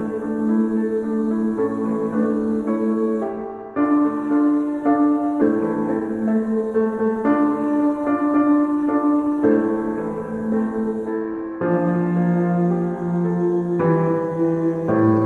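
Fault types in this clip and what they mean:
Skip ahead: At about 5.41 s the audio jumps forward with no gap and no filler. Roughly 0.7 s of material never plays, and the sound on either side is butted together almost directly. Unlike a dropout or packet-loss concealment, nothing marks the loss, neither silence nor a smeared or repeated fill. Continuity simply breaks, because a stretch was dropped while later audio was already waiting.
Jitter buffer speed-up: From 5.97 to 7.1 s the audio runs at about 124% speed, which is clearly hurried. About 0.3 s in total is trimmed away in many small cuts of one or a few pitch periods, so the receiver sheds excess buffered delay. Pitch stays where it was, unlike a resampling or clock-rate error, where faster playback would also raise the pitch. The cuts are spread across the whole stretch rather than landing as one jump.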